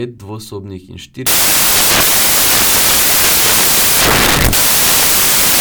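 From 1.27 s to the end of the clip at 5.60 s, the samples are built from the wrong bytes. The reader assembles each sample incorrectly: it is shifted by a byte, has its byte order swapped, or assumes the wrong alignment. The rapidly fluctuating low-order bits end up in the most significant position. The speech is buried under loud, harsh broadband noise, close to white on the louder sounds.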